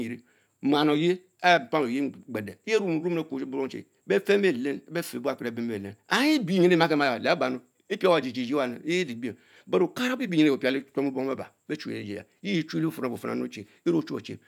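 No technical faults can be heard anywhere in the speech.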